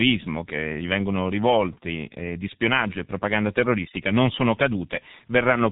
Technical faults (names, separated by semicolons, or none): G.723.1 codec